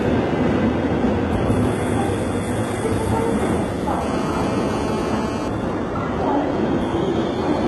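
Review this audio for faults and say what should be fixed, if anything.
Throughout the clip the treble sounds gritty and metallic, with nothing above 11.7 kHz. This is likely HE-AAC compression: heavy damage at what sounds like about 16 kbps, with the upper band rebuilt from copied lower bands, so its harmonics don't line up with the real content. Re-encode from the original at a higher bitrate.

From 4.01 to 5.48 s a hard, raspy buzz sits about 10 dB below the sound. This is GSM phone buzz: a nearby 2G phone's bursts at 217 Hz are rectified in the audio circuit, giving a steady harmonic-rich tone for that stretch. Keep mobile phones away from the recording equipment, or switched off.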